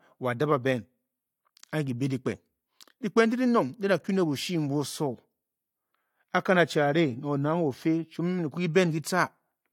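A speech recording with no technical faults to report. Nothing in it points to a problem at any stage between capture and playback.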